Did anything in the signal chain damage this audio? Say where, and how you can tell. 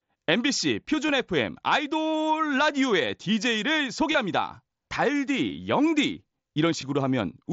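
Yes, concealed Bluetooth headset packet loss on the wireless link: short buzzy patches at 1.08, 4.12–4.15, 5.49 and 6.81 s, where the receiver looped recent waveform over dropped mSBC frames.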